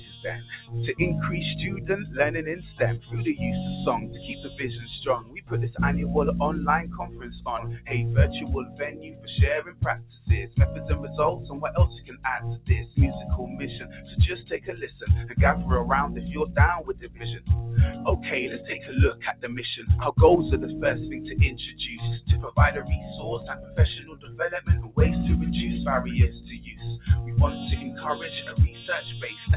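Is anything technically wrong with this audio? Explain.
Yes. A speech-oriented noise suppressor is running on material it wasn't built for, all the way through. It treats steady tones, ambience and reverb as noise and ducks them, letting sharp attacks pass. That gives the whole clip a pumping, fluttery feel, with the level swinging by roughly 15 dB as the suppressor clamps down and lets go. Because the suppressor keeps second-guessing what's noise, sustained parts and tails sound thin.

You can hear the sound cut by the noise suppressor in seven stretches: 0.16–0.75 s, 1.75–5.52 s, 6.85–10.84 s, 12.01–15.35 s, 16.88–19.45 s, 22.79–24.97 s and 26.57–28.02 s. Within each, held or decaying parts drop out for anywhere from about 0.4 s to a second and a half in total, sinking by about 12 dB at worst (about 13 dB around 23–25 s, about 10 dB near the end). Decays get chopped short while hits still come through.

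The call path itself sounds as expected: nothing above 4 kHz, which fits G.711 mu-law at 64 kbps.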